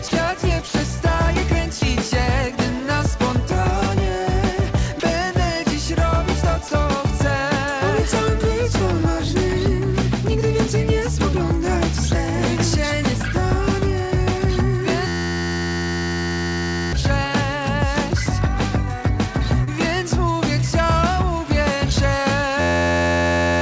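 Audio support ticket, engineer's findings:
Sound dropped by the voice detector, five short gaps. Audio gives way to flat comfort noise at 0.08 s, 0.68 s, 1.79 s, 5.00 s and 6.68 s. Each lasts 30 ms except 0.68 s, which lasts 60 ms. Likely cause is the sender's voice detector treating low-level audio as background and pausing transmission.

System hang loop at 15.07–16.93 s and again from 22.60 s to the end. A single 11.61 ms fragment repeats, producing a steady 86.1 Hz buzz, which fits a 512-sample buffer. The host froze while the hardware kept cycling the ring buffer. Roughly 2 s and 1.5 s of audio are lost.

Short concealed packet loss at 19.64 s. About 30 ms never reached the decoder in time. The receiver extrapolated from the preceding audio, then crossfaded back. The result is a brief smear at that point. Band limit at 8 kHz is consistent with the G.722 call path.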